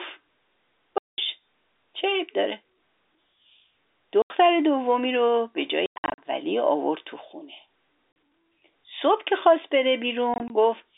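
Packet loss filled with silence cuts the speech five times. The first gap runs from 0.98 to 1.18 s, about 200 ms of dead air. Shorter holes follow at 4.22 to 4.3 s and 8.12 to 8.16 s. From 5.86 to 6.18 s, and again from 10.34 to 10.5 s, the dropouts come in scattered bursts. Every gap is a multiple of 20 ms, which fits 20 ms packets. Lost packets were replaced with silence, so each hole starts and stops abruptly, heard over the narrow telephone band of the G.711 line.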